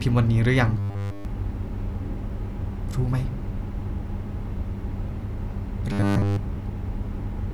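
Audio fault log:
0.79–1.25 s and 5.92–6.37 s, robotic sound from repeated short buffers. Both stretches turn the speech into a rigid, metallic buzz with a fixed pitch of 100 Hz. The buzz follows the original speech only roughly. Essentially all of each stretch is repeated material, not fresh audio. The cause is likely audio arriving too seldom, so the software loops the last short block. A 100 Hz buzz fits a block about 10 ms long.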